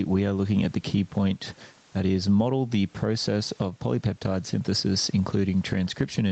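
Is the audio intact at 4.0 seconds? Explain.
No, gain pumping runs through the whole clip: an input gain likely set far too high makes a fast limiter clamp down on every loud sound. At 4.0 seconds the gain swings by around 10 dB, squashing the sound.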